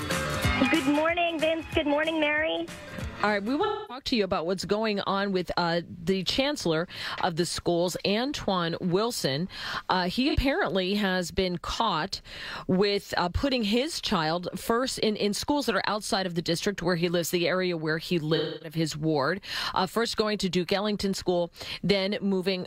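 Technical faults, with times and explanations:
3.64–4.05 s, 10.29–10.36 s and 18.35–18.76 s: AAC frame loss with concealment. The decoder covered missing data by re-using the last good spectrum with scrambled phase. This gives smeared, noisy patches of about 256 ms at the first and third times, consistent with six lost frames, and a brief 43 ms blur at 10.29 s.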